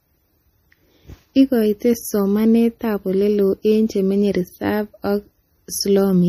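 Throughout, the speech has a watery, swirly quality with smeared consonants and nothing above 15.2 kHz, likely MP3 compression at a low bitrate; spectrograms show a flat ceiling and flickering holes.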